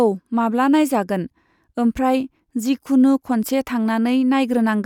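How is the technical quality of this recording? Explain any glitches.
Listening through the speech, nothing stood out as a technical problem.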